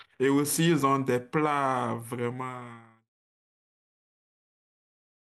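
Nothing is technically wrong with this speech recording; the level fades out smoothly from about 2 s to 3.1 s, as an editor would do it.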